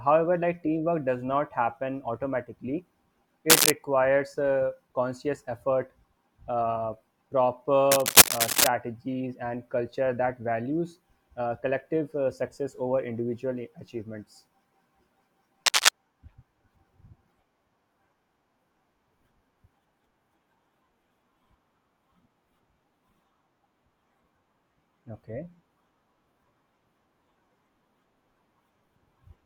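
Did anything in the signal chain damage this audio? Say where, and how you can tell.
Yes: cable scratch noise in the analogue wiring. Scratchy, rustling bursts, loud over the speech, at 3.49–3.73, 7.91–8.67 and 15.66–15.89 s, likely from a worn connector's contact resistance fluctuating.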